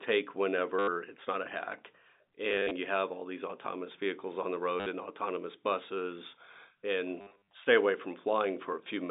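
Packet loss with last packet repeated occurs at 0.79 to 0.88 s, before "it's not a hack", and at 2.49 to 2.71 s, leading into "you have all these". It recurs at 4.80 to 4.86 s and 7.21 to 7.53 s, before "stay away". Lost packets were filled by replaying the previous one. The runs give a brief robotic buzz near 100 Hz, pointing to 10 ms packets.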